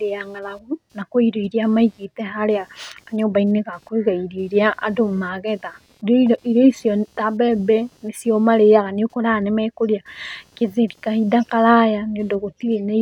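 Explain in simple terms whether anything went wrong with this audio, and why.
Underneath the speech, for the whole clip, there is a faint buzzing that pulses a couple of hundred times a second and comes and goes on its own schedule rather than following the talking. This is computer activity noise: as the computer's processor, graphics card or mouse shift their workload, the electrical ground the audio circuit shares with them is disturbed, and that disturbance leaks into the recording as a quiet buzz.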